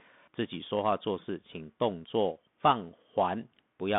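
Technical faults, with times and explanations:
Throughout, Bluetooth CVSD headset codec: the speech sounds thin and boxed-in, confined to roughly 150 Hz to 3.6 kHz with nothing above 3.8 kHz, and the codec damage is plainly audible. S sounds come out scratchy, loud bright passages distort, and a granular hiss sits underneath. The encoder sends only one up-or-down bit per sample, which fits a 64 kbps link, and its adaptive step cannot keep pace with fast, strong high-frequency movement.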